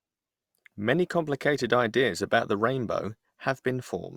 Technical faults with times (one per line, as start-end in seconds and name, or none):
0.00-4.17 sample clock jitter